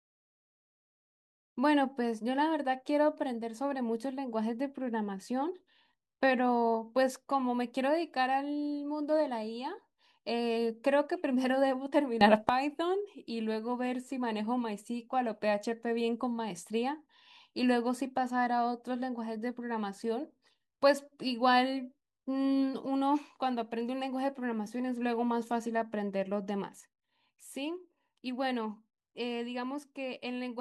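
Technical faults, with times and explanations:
12.21–12.49 s, sudden gain jump: sound and background noise leap together by about 13 dB with no ramp, then drop back, likely a gain step applied without smoothing, unlike a compressor's gradual pumping.
26.81–30.61 s, sudden gain jump: level and noise floor fall together by about 6 dB in one step and stay down to the end, instant rather than a fade.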